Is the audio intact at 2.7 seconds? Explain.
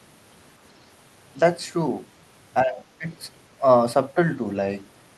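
No. From 2.62 to 3.06 s, both sides likely talked at once, and the echo canceller turned everything down. The result is speech suppressed in double talk: the voice dips by about 10 dB. Inside that span, from 2.78 to 2.82 s, the canceller likely failed to remove all of the loudspeaker signal, so the other side's voice leaks through as a faint scrap about 25 dB below the speech.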